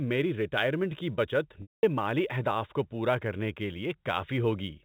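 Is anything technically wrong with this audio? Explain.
Yes, two things stand out on this telephone-band speech, which tops out at 4 kHz.

Sample clock jitter runs throughout: timing wobble of a few microseconds adds a roughness around 35 dB down that swells on loud, bright sounds and disappears in pauses.

Packet loss with pitch repetition hits from 1.62 to 1.83 s, after "ریٹائرمنٹ کی بچت". About 210 ms went missing, so the receiver repeated the last pitch cycle, giving a brief buzzy hold that fades to silence before "مالی اہداف کو پورا" cross-fades back in.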